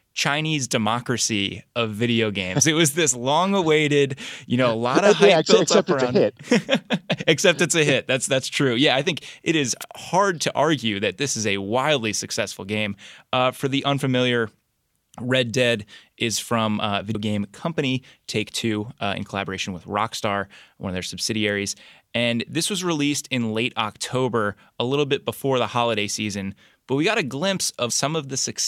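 At 9.80 to 9.84 s, between "it is" and "hard to argue that", a wireless microphone noise hit: the FM radio link briefly fades through multipath cancellation, so receiver hiss surges into a short static swish, visible as a brief broadband smear across the spectrogram.

At 17.14 s, between "is from uh" and "game company", and again at 27.89 s, damaged data in the compressed stream makes the decoder misread frames and resynchronise, giving a blip. Each appears as a narrow vertical spectral glitch with a discontinuity in the waveform.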